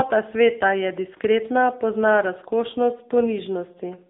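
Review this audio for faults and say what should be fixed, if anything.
AMR narrowband mobile codec damage runs throughout. Nothing passes above 3.7 kHz or below about 250 Hz, and the speech sounds buzzy and synthetic from the coarse pulse-driven vocal-tract model, which fits a low mode near 8 kbps. Use a wideband path or higher-rate codec.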